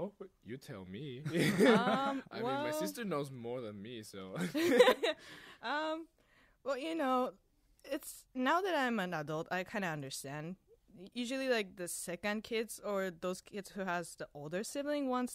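No technical faults are audible anywhere in the speech recording.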